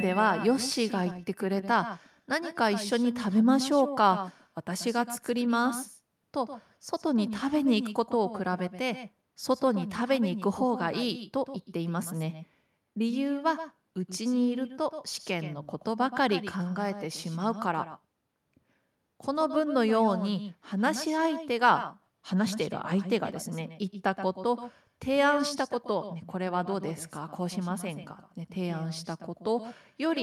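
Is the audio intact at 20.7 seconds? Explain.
No. Echo with no canceller runs throughout the clip. The far end's loudspeaker feeds its microphone, returning the speech about 150 ms later, about 11 dB quieter and thinner.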